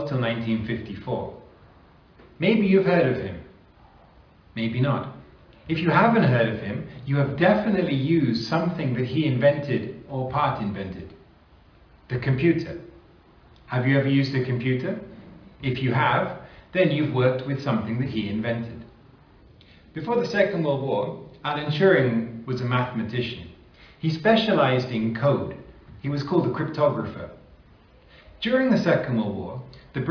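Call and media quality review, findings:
No audible faults found in the reviewed audio; nothing to action.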